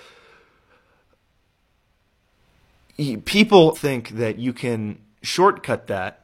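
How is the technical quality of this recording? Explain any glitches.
The speech has one glitch. From 3.72 to 3.79 s, just before "that you can", damaged data in a compressed stream makes the decoder lose sync, producing a brief disruption.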